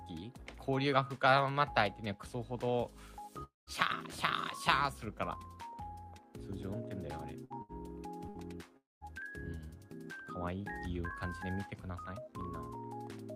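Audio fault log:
3.43–3.70 s and 8.77–9.04 s, long network dropout: the sound holds on as a fading buzz or hiss, then goes quiet for about 0.17 to 0.19 s before coming back with roughly a quarter second skipped. Likely a stretch where nothing arrived and the receiver concealed it.
7.45–7.53 s, 7.62–7.72 s and 8.29–8.38 s, burst of packet loss: three short gaps where the last sound gets stretched for 54 to 68 ms and turned down, then resumes with 60 ms missing each time, because a short run of packets never made it in time.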